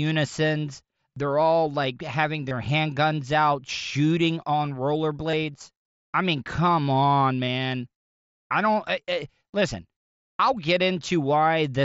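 Concealed Bluetooth headset packet loss occurs at 2.49 s after "they're all like having", at 5.31 s after "handguns out shooting on", and at 7.45 s after "I mean come on". Each gap of about 22.5 ms, consistent with three lost frames, is filled by repeating recent waveform. The result is a brief buzzy tone with a slight warble as real sound resumes through the wideband mSBC link.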